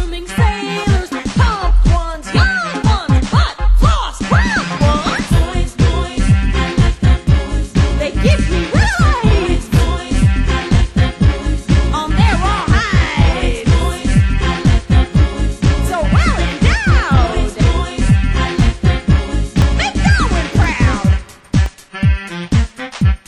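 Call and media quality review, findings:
Periodic USB or driver dropouts, 18.59–22.69 s. Regular ticks about every 1.02 s, roughly five. Each under a millisecond, filled with silence. Likely a background task stalling the USB bus or audio driver.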